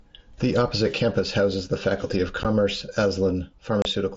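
Unconcealed Bluetooth headset packet loss, where dropped voice packets were replaced with silence rather than concealed, cuts abrupt holes in the speech at 2.43 s and from 3.82 to 3.85 s, on the wideband mSBC link.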